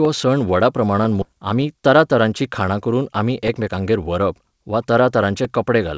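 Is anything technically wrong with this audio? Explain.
Yes. At 1.22 s the speech skips ahead: roughly 0.4 s of audio is simply gone, with no fill, because the jitter buffer overflowed and threw away the older audio it was holding while newer audio was already waiting. The two sides are spliced almost directly, so a syllable or more vanishes in a single abrupt jump. On a waveform the envelope changes shape instantly at that point; a spectrogram shows formant tracks breaking off and restarting at unrelated positions, with no silent gap between.

From 1.32 s to 3.78 s there is a jitter buffer speed-up. The buffer still held more audio than it targets, so the receiver kept cutting out pitch-period-sized slices, about 0.2 s in total, running the speech near 108% of normal speed while pitch stays unchanged. It sounds slightly hurried. A spectrogram keeps harmonic spacing the same but compresses syllables in time; the waveform shows tiny seams where periods were removed.

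The speech has travelled through a G.722 call path at 64 kbps, so nothing reaches above 8 kHz.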